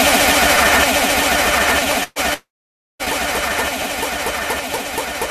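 You'll hear a jump in the audio at 0.56 s and again at 1.82 s. Nothing goes quiet; the sound just skips ahead, losing about 70 ms the first time and about 20 ms the second. That's likely a dropped buffer (overrun), where the capture side didn't read its samples in time and the hardware wrote over them. From 2.03 to 2.19 s there's a burst of packet loss. The receiver stretches the last bit of sound out and fades it for about 120 ms, with a short near-silent tail of around 20 ms, then picks up again with about 120 ms of material gone. Right after that, from 2.34 to 3.02 s, there's a longer gap, likely a long network dropout. The last sound is carried on and decays, and for about 550 ms only silence or a faint steady floor is left. The audio then comes back with roughly 660 ms missing.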